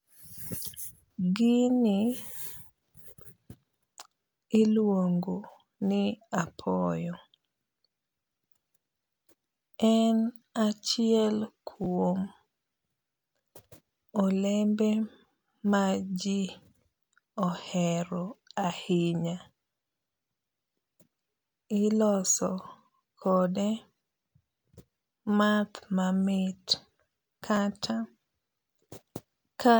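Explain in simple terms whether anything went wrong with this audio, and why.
Twice in this speech, at 11.84 to 11.86 seconds and again at 27.56 to 27.58 seconds, there is a tiny scrambled blip. This is chunks out of order. The audio travels in 10-millisecond pieces, and at each spot one piece arrived one step late and played after the piece meant to follow it. Nothing is missing, but the swap leaves hard joins.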